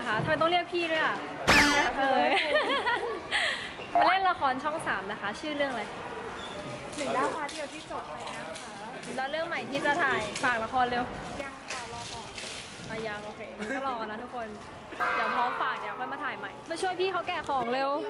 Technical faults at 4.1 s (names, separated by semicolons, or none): none